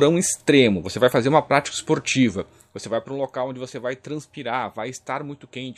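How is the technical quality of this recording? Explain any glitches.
There is one glitch, and it is audible. From 2.14 to 3.34 s there is zipper noise. The level drops by roughly 10 dB, but not in one smooth sweep. It falls in 1 dB steps, around ten of them each second. Nothing smooths the jumps between steps. Each sudden step puts a small click into the waveform. Together the clicks form a fast ticking or zipping that rides on the sound while the level falls.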